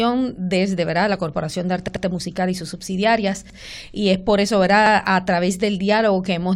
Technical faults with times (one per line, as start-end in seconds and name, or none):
1.88-2.05 repeated buffer
3.50-3.58 repeated buffer
4.86-4.95 repeated buffer